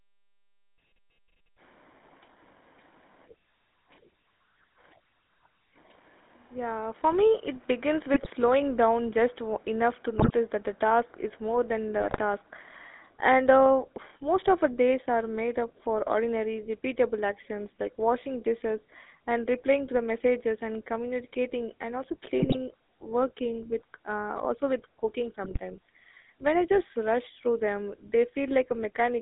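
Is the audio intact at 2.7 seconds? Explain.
No. At 2.7 seconds, as throughout the clip, the speech has a buzzy, gravelly roughness inside a narrow 250 Hz to 3.7 kHz band, the sound of the GSM full-rate codec: a modelled vocal tract driven by coarse regular pulses, consistent with a 13 kbps rate.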